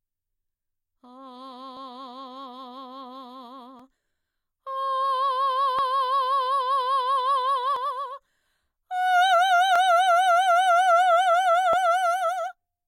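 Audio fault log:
1.77–11.78 s, overlap between stream segments: Skips at 1.77, 3.80, 5.79, 7.76, 9.76 and 11.73 s. Overlapping 2-second segments are trimmed, dropping 26–43 ms of music, heard as tiny skips.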